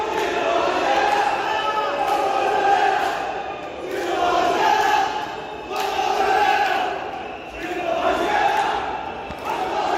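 No technical faults can be heard anywhere here.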